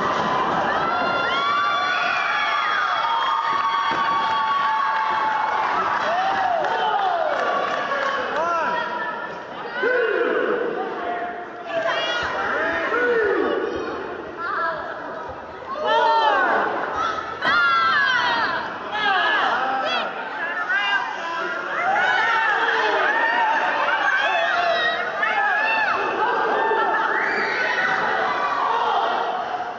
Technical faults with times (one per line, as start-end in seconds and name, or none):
none